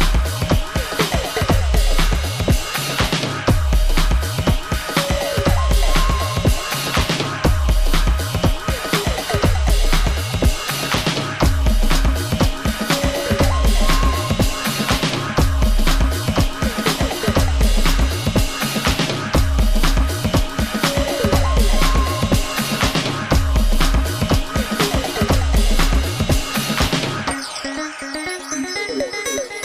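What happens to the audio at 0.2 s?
Nothing goes wrong at 0.2 s; the audio plays through that moment intact, with no dropout, click or distortion.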